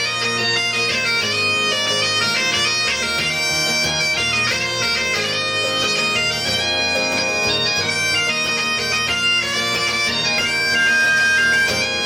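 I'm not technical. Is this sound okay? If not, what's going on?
No. From 10.26 to 11.89 s a 1.6 kHz whistle swells up over about half a second. That's loudspeaker feedback squeal: a microphone re-amplifying its own loudspeaker.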